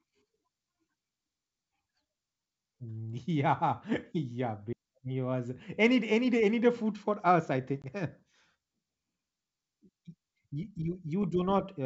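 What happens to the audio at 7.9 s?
Packet loss on an ADPCM call, 7.82 to 7.93 s: right after "food for us I", a 20 ms gap, roughly one packet, drops out. The decoder's predictor and step size lose sync, so the sound returns slightly distorted before settling.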